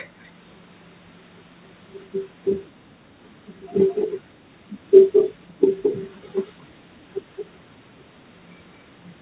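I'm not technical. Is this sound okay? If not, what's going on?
No. An echo leak, likely a speakerphone whose echo canceller missed some sound, repeats the speech about 0.21 s late at 3.94–4.12, 5.12–5.34 (loud), 5.82–5.97 and 6.45–6.62 s (faint).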